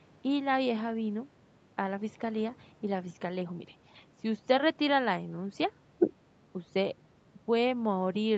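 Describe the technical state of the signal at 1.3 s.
At 1.3 s the speech is intact, with no dropout, glitch or distortion, just the ordinary call-path sound whose content stops at about 8 kHz.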